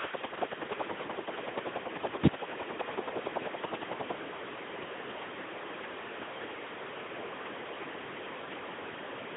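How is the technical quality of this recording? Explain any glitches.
Pretty rough, honestly. The speech comes through heavily coded the whole way, and the first half has a steady ticking laid over it.

Speex codec, throughout: the speech sounds hoarse, buzzy and close to robotic, which points to Speex at a very low setting, around 2 kbps. With that few bits for the excitation, the voice texture falls apart. The band sits at roughly 200 Hz to 3.5 kHz, with nothing above 3.8 kHz, so it's thin and muffled.

Train of clicks, from 0.05 to 4.12 s: about forty near-identical pops arrive evenly at 10.6 per second, peaking a few dB above the speech and ticking right through the pauses. That regular spacing suggests a likely cause of interference from nearby equipment or a faulty connection.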